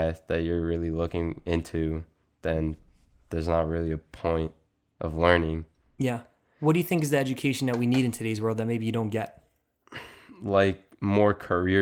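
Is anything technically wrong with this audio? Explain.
No, no technical faults are audible.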